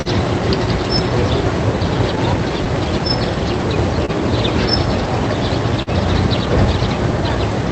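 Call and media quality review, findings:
Recurring small timing hiccups at uneven intervals across the whole recording, repeated slivers of sound. Clock drift between sender and receiver: sender clock running slow, roughly 2% behind the receiver. Jitter buffer keeps draining, so the receiver repeats short pieces and at times briefly runs dry. Drift persists through the entire clip and does not settle, pointing to an unsynchronised capture clock on the sending side rather than network conditions.

Sound held too long, with a slight buzz or dip, three times: 0.01–0.08 s, 4.06–4.11 s, 5.82–5.90 s. Short stall from a late packet, jitter buffer underrun. The receiver stretched the last audio by 40 ms, 28 ms and 44 ms respectively, then resumed at the same point; nothing appears lost, but each stall adds that much delay. The audio passed through the Opus call path at about 40 kbps, whose top end stops near 8 kHz.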